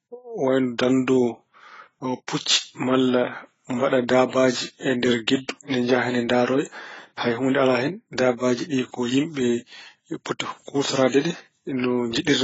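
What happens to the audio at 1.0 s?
At 1.0 s the speech carries the marks of transcoding between lossy codecs, which runs through the whole clip. The signal was likely coded first at a very low AAC rate, around 16 kbit/s, and then re-encoded with Vorbis, which wasted its bits reproducing the earlier damage and added its own. Nothing survives above 7.6 kHz, so the speech sounds dull, with the artefacts of both codecs heard together.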